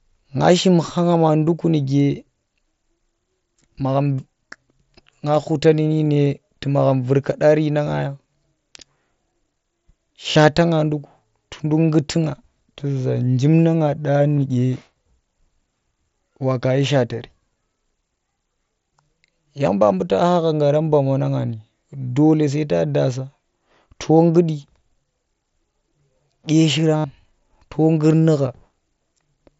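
At 10.31 to 10.36 s, just before "nga nduku tunduk nggutu", about 45 ms of concealed Bluetooth headset packet loss fills the gap with a buzzy, full-level repetition of the preceding waveform. Near 14.37 to 14.42 s, shorter losses scattered over 60 ms, none longer than 15 ms, are nearly hidden. The longest, 75 ms at 26.97 to 27.04 s, holds a tone and warbles as real sound returns. Unlike plain dropouts, the level never falls to silence.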